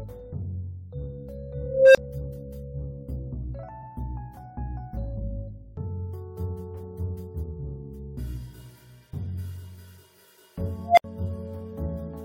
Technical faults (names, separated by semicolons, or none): unstable filter; repeated frames